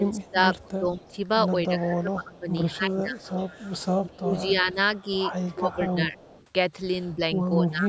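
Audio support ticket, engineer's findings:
Speech suppressed in double talk, 0.00–6.19 s: echo canceller likely failing to separate near talker from loudspeaker echo while both sides talk, so it attenuates everything. Speech dips and breaks up in pieces, about 20 dB down at worst, roughly 3 s affected in total. Same suppression again at 7.15 s to end: brief dip, roughly 0.3 s affected, similar depth, with the band still topping out at 8 kHz.

Echo leak at 0.23–1.16 s, 2.71–4.10 s and 5.12–6.46 s: likely residual loudspeaker pickup passing an echo canceller that did not remove it all and returning to the far end. Faint delayed copy of the speech trails by 200 ms, about 30 dB below the direct signal, overlapping the suppressed stretches.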